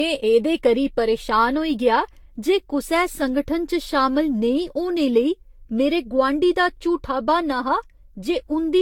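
Generation loss runs through the whole speech clip, from start to finish. The speech sounds swirly and hollow, with smeared consonant attacks and a watery texture that the roughly 70 kbit/s range the sound points to would not produce on its own. The likely cause is repeated decoding and re-encoding with a Vorbis-style codec, around seven passes, each re-quantising on a shifted frame grid so noise and spectral holes pile up. Nothing remains above 19.2 kHz.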